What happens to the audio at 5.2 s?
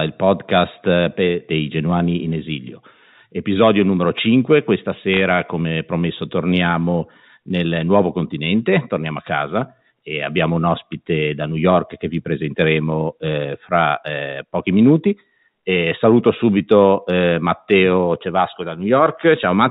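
A short burst of crackle, a cluster of sharp ticks over otherwise unchanged speech, runs from 5.14 to 5.20 s. These are bit errors on a digital phone line. Bits flipped in the G.711 telephone coding stream, a small fraction of well under one percent, and each error corrupts a single 8-bit logarithmic sample. Where a flip lands on a high-order bit or the sign of a loud sample, the sample jumps sharply, producing an audible click.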